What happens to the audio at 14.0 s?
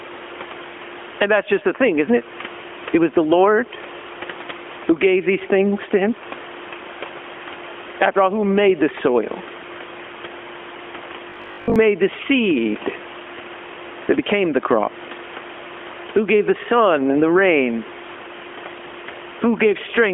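At 14.0 s the gain pumping heard across the whole clip continues. The room noise swells in pauses and ducks roughly 15 dB under each loud syllable, likely from a fast limiter reining in excessive mic gain. On the waveform, the noise floor visibly rises and falls between peaks.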